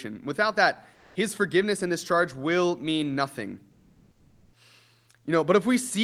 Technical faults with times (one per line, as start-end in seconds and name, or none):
0.93-1.15 comfort noise in place of the background
3.71-4.53 comfort noise in place of the background